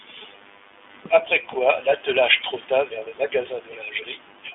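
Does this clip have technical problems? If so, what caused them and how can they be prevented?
Yes. Throughout, the speech carries iLBC codec damage: the audio sits in a telephone band of roughly 250 Hz to 3.5 kHz, with nothing above 3.8 kHz, and has a plainly rough, synthetic texture. Each frame's excitation is coded independently, consistent with 20 ms frames and a 15.2 kbps mode. A plain low-pass filter or a clean narrowband codec would leave the voice smooth. To prevent it, record or route the call through a wideband codec such as Opus instead of iLBC.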